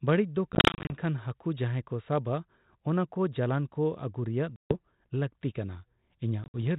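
Packet loss on an ADPCM call strikes three times. From 0.52 to 0.92 s, between "ᱵᱟᱹᱲᱤᱡ ᱫᱚ" and "ᱦᱟᱠᱩ ᱡᱟᱦᱟᱸᱭ", short hard-edged silences scatter. More gaps follow at 4.56 to 4.74 s, before "ᱞᱟᱹᱠᱛᱤ ᱠᱟᱱᱟ", and at 6.44 to 6.59 s. Each time the decoder's prediction drifts from the sender's. The speech returns slightly distorted, then settles within tens of milliseconds.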